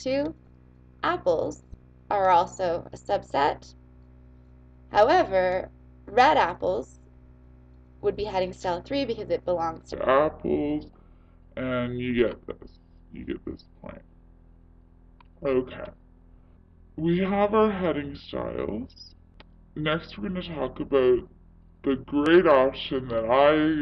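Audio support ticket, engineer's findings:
Wrong sample rate, 9.93 s to end of clip. Playback clock mismatch with no resampling stage; the 0.667x slowdown fits 48 kHz material clocked out at 32 kHz. Sound drops about 7 semitones and drags, with speed and pitch falling together.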